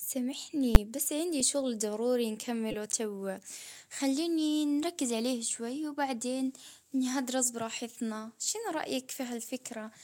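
At 0.75 s, a calculation produced invalid numbers at full scale. Infinite or undefined values were clamped to the largest sample value the system allows, and the output stayed pinned there for a 10 ms block. A block that short is heard as a single loud bang cutting across the speech.

At 1.40 s and again from 2.71 to 2.74 s, a corrupt frame was decoded. Flipped bits in the compressed data led the decoder to apply wrong gains and misread codes, which placed energy at frequencies where it does not belong. The first event spans roughly two frames and the second roughly one. Each is heard as a short chirp or noisy blip, peaking at around -25 dBFS, well below the bang.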